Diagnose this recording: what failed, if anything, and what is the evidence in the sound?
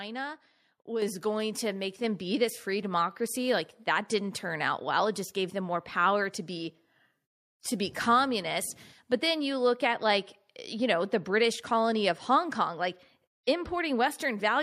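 The call processing stepped up the microphone volume twice, raising the device's input gain in single jumps. At 1.02 s, just before "going to make", voice and background rise together by about 6 dB. At 2.04 s, before "be this free democracy", they rise by another 4 dB or so.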